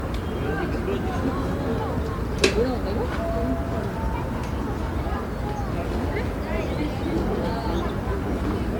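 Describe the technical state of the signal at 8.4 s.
At 8.4 s you're hearing generation loss, present across the whole clip: a swirly, hollow, smeared texture with blunted attacks. It's likely from about seven rounds of MP3 re-encoding, each pass requantising on a shifted frame grid at what sounds like 128 kbit/s. The content reaches up to about 20.1 kHz.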